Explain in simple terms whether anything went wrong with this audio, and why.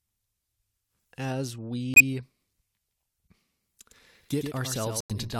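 Twice the sound drops out completely for a split second, from 1.94 to 2.02 s and again from 5.00 to 5.12 s. Each gap starts abruptly and the speech carries on afterwards with no time lost. This is a corrupt frame muted fault. The compressed data held small damaged chunks, a few in a row each time. The decoder rejected them and the player filled their place with silence.

From 3.91 s to the end, the speech is heard twice: a second copy, a little quieter, trails about a tenth of a second behind and cuts in suddenly. That is a doubled audio track. The copy keeps the full sound with no room echo or fading, so it is not a reflection. The likely cause is the same audio being captured a second time through a slower path and mixed in with the original.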